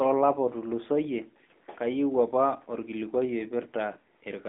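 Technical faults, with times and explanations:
Throughout: AMR narrowband mobile codec. The speech sits in a telephone band of roughly 200 Hz to 3.6 kHz, with nothing above 3.7 kHz, as expected from 8 kHz sampling. The coder rebuilds the voice from a vocal-tract filter driven by sparse pulses in short subframes rather than sending the waveform itself. That gives a plainly audible buzzy, synthetic edge, which fits a mid-rate mode of around 10.2 kbps.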